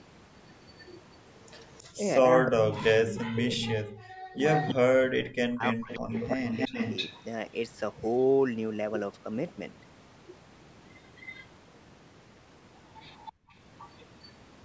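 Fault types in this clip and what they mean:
Echo leak, 0.78 to 14.32 s: a copy of the speech about 319 ms late, 10 to 25 dB quieter, likely leaking through an incomplete echo canceller.
Speech suppressed in double talk, 1.96 to 6.73 s: the speech dips in pieces, sometimes by about 40 dB, likely the canceller turning down both overlapping talkers.
Background gated by the echo canceller, 13.33 to 13.54 s: room sound drops about 32 dB for roughly 0.2 s while the canceller clamps the microphone.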